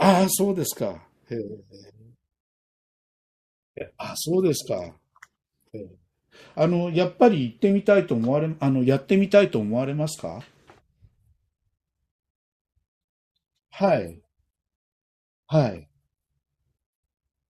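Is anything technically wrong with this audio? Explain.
No, nothing is technically wrong with this audio.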